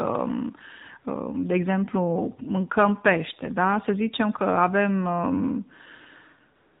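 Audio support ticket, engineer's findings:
AMR narrowband mobile codec, throughout: speech path carried at 8 kHz sampling, low-rate mode consistent with roughly 7.4 kbps. Nothing above 4 kHz survives, so sibilants are dulled and air is gone. Sparse pulse excitation per 5 ms subframe leaves the voice plainly buzzy and synthetic, with codec damage clearly audible.

AMR comfort noise, 6.56 s to 6.8 s: sender's voice activity detection flagged silence, and speech frames stopped for the last 0.26 s. The receiver substitutes generated noise from a coarse level and spectrum estimate. The real background drops out, replaced by a smooth, steady hiss that switches in abruptly at the clip's tail.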